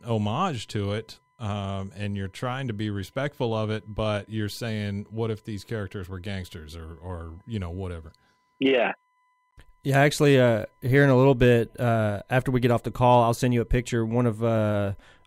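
A speech clip with two technical faults. A steady USB whine sits under the whole recording as a fixed-pitch tone at 1 kHz, with its energy concentrated at that fundamental and roughly 45 dB below the speech. The pitch matches the 1 ms frame rate of USB transfers. The bus's periodic current draw is leaking into the audio path through shared power or ground. There is also a gap at a join of encoded pieces at 9.51 s: a silence of about 14 ms cuts into continuous speech, and the sound then resumes where it broke off. This points to separately encoded segments of about 10 s that were concatenated without trimming. The encoder's start-up delay and final-frame padding remain in the file as dead air, and the codec smears the edges of the dropout.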